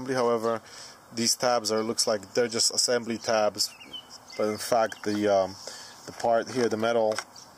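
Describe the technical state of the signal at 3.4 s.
At 3.4 s the signal runs cleanly, with no audible technical fault at that point.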